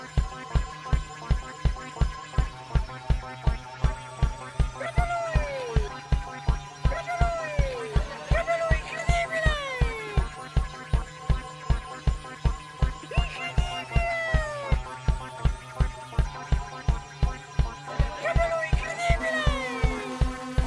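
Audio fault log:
Nothing here to log, as there's no fault anywhere in the clip.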